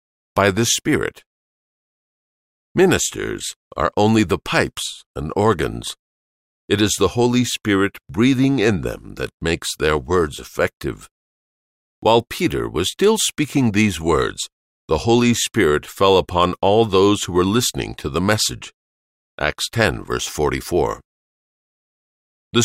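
No technical faults can be heard anywhere in this speech recording.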